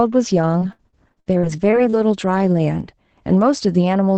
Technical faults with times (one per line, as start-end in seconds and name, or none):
0.59-1.94 repeated packet loss (robotic sound)
2.81-3.18 sudden gain jump